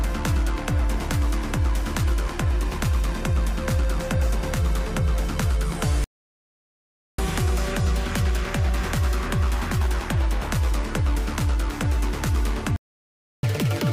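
At 6.04 s the sound cuts out dead for about 1.14 s, a playback stall, most likely the player starving for data or its thread getting blocked. It picks up again at 7.18 s. From 7.18 to 10.18 s there's a catch-up at higher speed: the backlog runs at 1.1 times speed, so everything is a touch rushed and sits about one and a half semitones sharp before settling. A second stall silences things from 12.76 to 13.43 s, likely the same starvation. The catch-up after it is much harsher: 2.0 times speed, pitched up by close to ten semitones, chipmunk-like, right through to the end.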